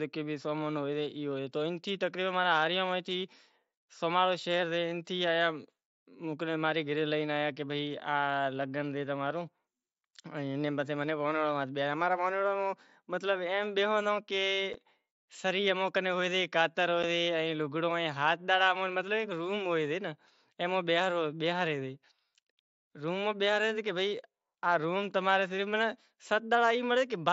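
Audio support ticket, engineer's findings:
Unconcealed Bluetooth headset packet loss on the mSBC headset link: one 7.5 ms voice packet dropped each time, replaced by silence or an idle pattern, no concealment. Abrupt hole in the speech at 14.73 s and 17.03 s, each fitting a single lost packet.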